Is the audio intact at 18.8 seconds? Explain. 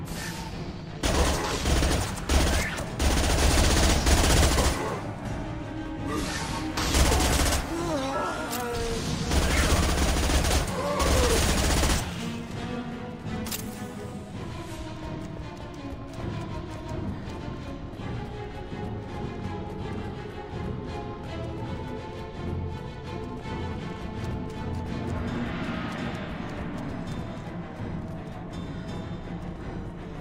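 Yes, at 18.8 seconds the audio is intact, with no dropout, click, distortion or other fault to be heard there.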